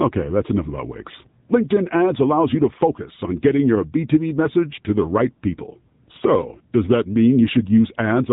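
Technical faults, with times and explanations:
Throughout, AMR narrowband mobile codec: the speech is confined to a phone-like band with nothing above 3.8 kHz, and it carries a plainly audible buzzy, synthetic edge, which fits a low AMR-NB mode near 8 kbps. The codec rebuilds the voice from a vocal-tract model excited by a few pulses per short subframe, so detail is replaced by that pulse-driven buzz. A simple low-pass filter would dull the highs without adding this artificial, vocoder-like texture.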